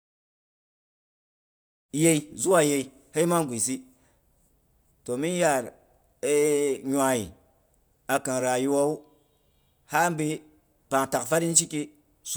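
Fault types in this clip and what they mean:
No faults heard in this speech.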